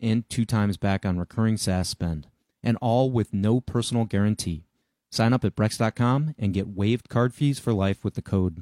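No technical faults are audible anywhere in the speech.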